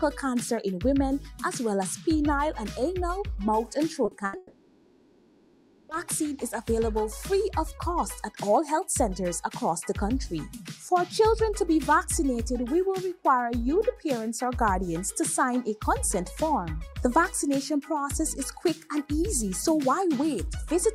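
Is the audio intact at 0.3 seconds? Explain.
Yes, at 0.3 seconds the audio is intact, with no dropout, glitch or other fault to be heard at that point.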